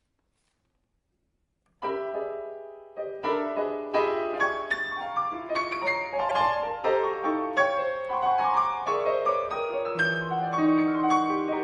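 A broken MP3 bit reservoir is the likely cause at 6.28 to 6.31 s: frames about 26.1 ms long fetch wrong borrowed data, so the audio jumps with a brief glitch.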